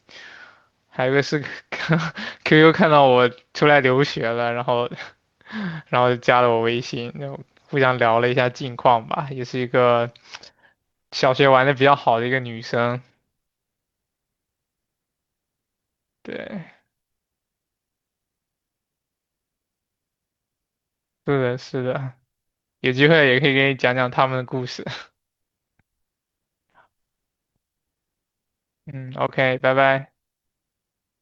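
No technical faults are audible.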